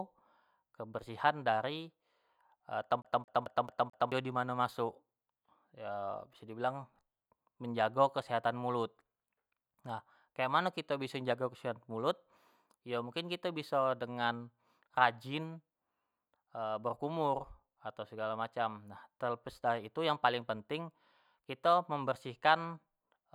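At 3.02 s the speech catches on itself: a short slice of about 0.22 s plays five times in quick succession, each pass separated by a brief mute, giving a rapid, mechanical stutter that runs until 4.12 s. This is a CD stuck on one turn. A scratch sends the laser back a track at the same point of each rotation, so the same fragment keeps repeating at that even rate.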